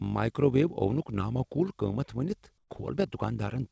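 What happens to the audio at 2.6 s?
From 2.58 to 2.70 s, the sender's voice detector likely halted transmission, so comfort noise replaces the real background: steady, featureless noise about 9 dB quieter for 120 ms. Throughout, including here, overlap-add ripple from frames rejoined without constant gain adds a rough flutter of about 6 dB at roughly 50 Hz.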